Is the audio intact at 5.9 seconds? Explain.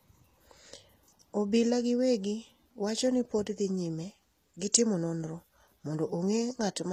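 No. At 5.9 seconds, as throughout the clip, the speech carries plainly audible HE-AAC compression damage, likely from HE-AAC coding at a low bitrate, which fits about 24 kbps. Only the lower spectrum is actually encoded. The treble is synthesised by spectral band replication from transposed lower bands under a coarse envelope, so upper harmonics are misaligned with the true ones, and s sounds come across gritty, metallic or lispy.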